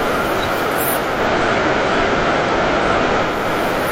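Digital radio blending to analogue, 0.98 to 3.5 s: digital reception failed and the sound faded over 300 ms to FM, adding faint hiss.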